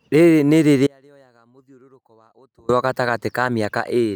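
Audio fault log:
0.87–2.69 s, audio dropout to a faint residue: the speech cuts off abruptly and for about 1.8 s only a faint leak remains, roughly 35 dB below normal, before returning just as suddenly; the signal was likely lost upstream while the downstream path stayed live.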